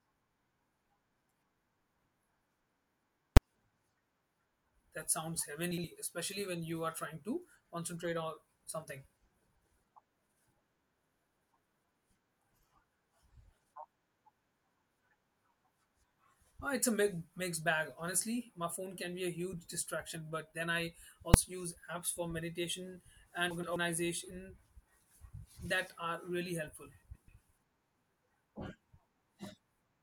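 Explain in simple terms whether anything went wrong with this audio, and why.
Invalid numbers at full scale: a calculation broke and pinned the output at its loudest possible value, heard as a single sharp bang at 3.37 and 21.34 seconds.

Frames out of order: short neighbouring chunks of audio were played back swapped, causing brief garbled flutters at 5.71–5.84, 23.50–23.76, 27.03–27.28 and 28.31–28.37 seconds.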